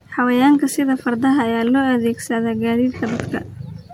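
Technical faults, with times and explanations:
Throughout, generation loss: swirly, hollow, smeared speech with blurred onsets, likely from about five MP3 re-encodes stacking quantisation noise; spectrogram shows patchy holes, nothing above 19.9 kHz.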